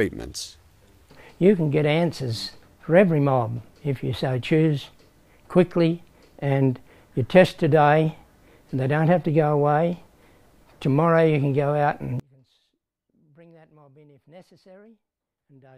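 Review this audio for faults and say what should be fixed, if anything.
From 12.20 s to the end at 15.78 s, the sound collapses to a faint trace about 30 dB quieter. The likely cause is one channel inverted: with one side's polarity flipped, everything shared by left and right cancels in a mono sum, and only their small difference remains. To prevent it, check polarity on each channel and listen to a mono fold-down before export.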